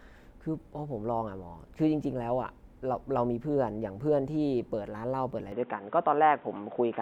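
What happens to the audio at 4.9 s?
Nothing goes wrong at 4.9 s: the speech carries on intact through that moment, with no dropout, click or distortion to be heard.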